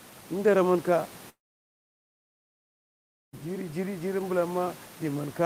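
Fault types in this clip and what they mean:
Long network dropout: likely a stall in the network path, so no audio arrived from 1.29 to 3.35 s and about two seconds of speech were lost. The receiver carried the last sound briefly as a fading buzz, then near silence until the speech resumed.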